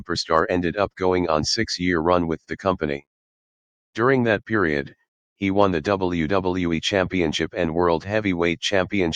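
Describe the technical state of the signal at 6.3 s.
At 6.3 s the signal is intact, with no audible technical fault at that moment.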